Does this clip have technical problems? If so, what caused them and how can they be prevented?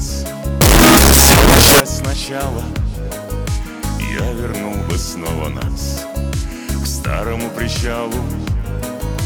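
Yes. From 0.61 to 1.80 s the sound turns into loud, harsh distortion, with quiet bits as loud as everything else. That's likely signed and unsigned mixed up: 16-bit samples read with the top bit flipped, so each zero crossing jumps across the full range. Declaring the sample format explicitly at every read and write prevents it.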